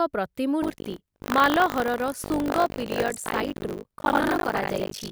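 A speech clip with buffer tearing from 0.62 s to the end. A robotic buzz at 50 Hz rides on the sound wherever it is present. Writer and reader have slipped within the ring buffer. So most of each 20 ms period replays audio from about 70 ms earlier, with hard joins.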